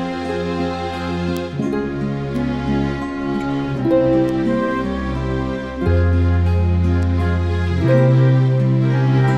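Single flipped bits in memory or a digital link throw individual sample values off by a power of two, giving bit error spikes: sharp broadband ticks at 1.37 s (about -5 dBFS), 2.36 s and 4.29 s (both about -11 dBFS), and a three-sample tick at 7.03 s (about -17 dBFS), each unrelated to the surrounding sound.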